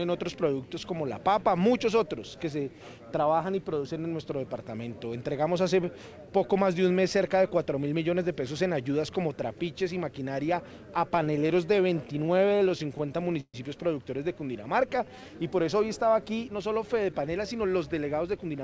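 From 11.16 to 13.56 s, repeated stalls (stutter): the jitter buffer kept running dry, and the last sound was held over about twenty short gaps, the longest about 130 ms, so the audio drags and stutters. From 14.78 to 15.22 s, a jitter buffer slow-down repeats pitch periods to rebuild reserve, adding 55 ms; playback runs at 89% speed without a pitch change, so sounds stretch. From 17.12 to 18.61 s, a jitter buffer speed-up trims around 150 ms of pitch periods to shed excess delay, running at 109% speed at unchanged pitch and sounding hurried, all within a band that stops at 8 kHz, consistent with a G.722 call path.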